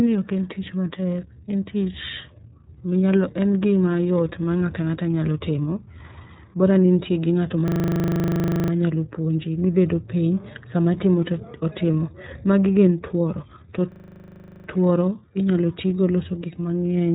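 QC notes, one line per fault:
Throughout, iLBC codec: narrowband coding in 30 ms frames, consistent with 13.33 kbps, removes everything above 3.8 kHz, leaving the speech plainly rough and synthetic.
7.68–8.72 s and 13.92–14.68 s, system hang loop: the system froze while the hardware kept replaying its buffer. A 40 ms piece repeats at 25 Hz, 26 and 19 times, giving a machine-gun stutter. The first comes after "ni in gi ng'ato" and before "puonji mibedo piny sama", the second after "gin tuoro to" and before "tuoro inyalo tigo loso".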